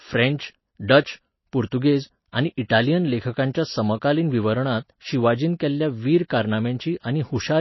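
From start to finish the speech carries plainly audible damage, likely from MP3 compression at a low bitrate, around 24 kbps. Nothing remains above 5.8 kHz, so s sounds lose their edge, and weak frequency lines dropping in and out between frames give a watery, swirling texture with smeared attacks.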